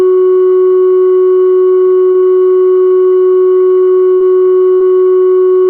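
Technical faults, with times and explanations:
2.11 to 2.25 s: short stalls from late packets, twice. The jitter buffer ran dry and the last sound was held, about 30 ms then 19 ms, nothing lost.
4.14 to 4.23 s and 4.74 to 4.83 s: bursts of packet loss. Each time the last sound is held for 60 ms and faded, then the music resumes 60 ms further on.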